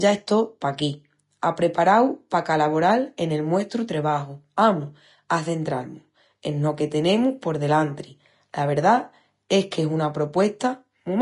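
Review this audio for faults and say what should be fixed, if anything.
Throughout the speech the treble is hissy and grainy, with sibilants smeared into noise and consonant attacks softened, and nothing survives above about 10.6 kHz. This is plainly audible Vorbis compression, likely from a low-bitrate encode: the damage fits roughly 34 kbps, where the codec drops the top band and quantises the remaining high residue so coarsely that detail turns to noise. On a spectrogram this shows as a hard ceiling at 10.6 kHz with speckled, blotchy texture beneath it. Encode at a higher Vorbis quality setting, or keep an uncompressed master for distribution.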